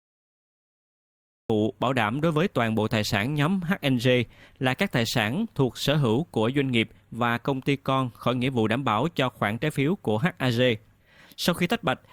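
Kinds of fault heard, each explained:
Cut-off start: the capture kicked in late, so there's digital silence until about 1.50 s, then the speech jumps in mid-sound with no natural attack.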